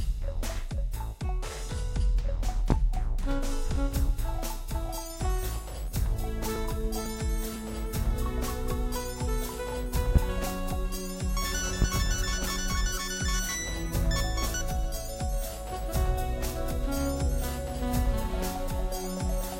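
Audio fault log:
2.70–2.74 s, 10.16–10.19 s, 11.82–11.85 s: loud pop, single sharp thumps roughly 15 to 20 dB above the sound, which continues underneath; likely a brief voltage spike, not a dropout or crackle.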